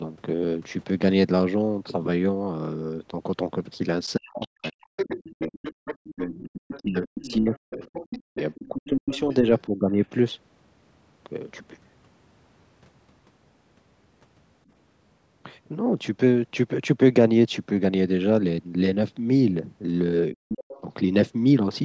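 From 4.16 to 5.52 s the talker's speech dips hard, by as much as 40 dB, for about a second in total. This is speech suppressed in double talk. Both sides were likely talking at once, and the echo canceller could not tell its own talker from the loudspeaker echo. So it turned everything down. The same happens from 5.95 to 9.99 s, chopping about three seconds of speech, and again briefly from 20.33 to 20.63 s.

Around those stretches, the other side's voice leaks through. It runs from 4.42 to 6.84 s at roughly 10 dB below the talker, and from 7.23 to 9.62 s a little quieter. A short scrap appears at 20.62 to 20.81 s, around 20 dB down. This is likely residual echo: the far voice played on the loudspeaker and reached the microphone, and the canceller did not remove all of it. It sounds like a second, fainter voice behind the talker. Like the rest of the clip, it has nothing above 8 kHz.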